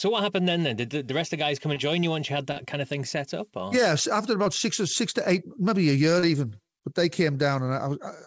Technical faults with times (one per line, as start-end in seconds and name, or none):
1.74-1.78 short concealed packet loss
2.52-2.58 short concealed packet loss
4.44-4.47 short concealed packet loss
6.19-6.24 short concealed packet loss